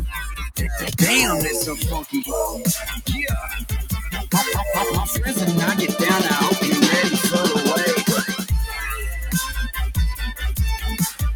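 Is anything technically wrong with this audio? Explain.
Yes. Throughout, the sound pumps and thins, with held parts and tails sinking by around 10 dB while attacks survive. This is a noise suppressor applied to music or sounds, treating steady content as noise.

At 0.11 to 0.6 s, 2.84 to 3.09 s and 4.18 to 4.33 s, the sound is ducked by about 14, 12 and 9 dB: sound cut by the noise suppressor.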